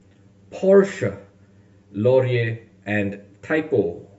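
Throughout, channel delay (comb filtering) leaves the speech hollow: one channel trails by roughly 10 ms, carving fixed notches from around 50 Hz upward, unlike flanging's sweeping ones.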